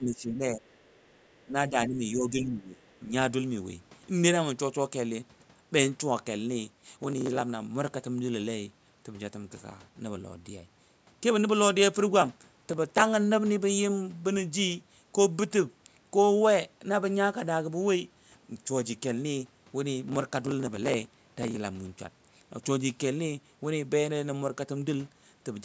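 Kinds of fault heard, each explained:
speech suppressed in double talk: The main talker's level sags in three places: across roughly the first half second, in a quick dip near 1.5 s, and through a longer stretch from about 1.7 to 3.1 s. The deepest cuts are somewhere around 10 to 15 dB. That pattern points to an echo canceller that likely heard both sides talking at once, couldn't separate this talker from its own loudspeaker echo, and turned everything down together.
other side's voice leaking through: Between about 0.7 and 1.1 s, a second voice slips in underneath the main talker. It's very faint, roughly 40 dB below the main speech, so you really have to listen for it. It's most likely the far end playing out of the device's loudspeaker, with the echo canceller not fully removing it from the microphone signal. Only a short scrap gets through.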